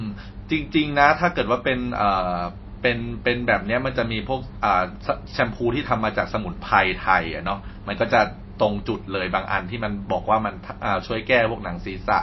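From start to finish the speech sounds dull and watery, with nothing above about 5.8 kHz, so s sounds lose their hiss and turn swirly, and consonant onsets smear. The damage is plainly audible throughout. The likely cause is MP3 compression at a low bitrate, which fits something near 24 kbps. Starved of bits, the encoder removed the treble at a fixed cut-off and dropped weak frequency lines that flicker in and out between frames.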